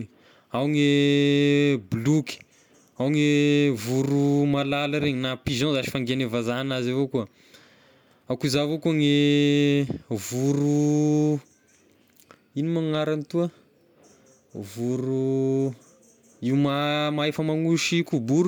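Nothing in this recording of speech stands out as a technical fault at any point, so there's nothing to flag here.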